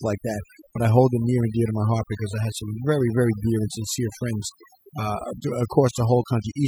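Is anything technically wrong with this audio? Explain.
Yes. Overdone noise removal affects the speech for the whole clip. The noise reduction was set too aggressively, so any frequency band whose level sits near the tool's noise estimate is pulled far down or gated off entirely. Low-level parts of the voice fall into that range and are removed along with the noise. Between phrases the background drops to near silence scattered with twinkling specks.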